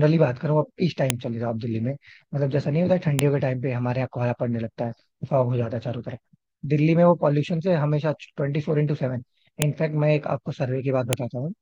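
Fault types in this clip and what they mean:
File header played as audio: the sharp, loud snaps at about 1.10, 3.19, 9.62 and 11.13 s come from the header bytes of separate WAV pieces being played as if they were samples, because the pieces were joined without stripping them. Each snap is a single, near-instant burst that ignores the speech around it. An ordinary splice click or a clipped peak would instead follow the level and shape of the signal.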